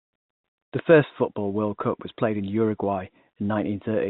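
The speech carries no technical fault; it has the narrow telephone band and faint level-following hiss expected of G.711 telephone coding, which fits the standard 64 kbps mu-law line format.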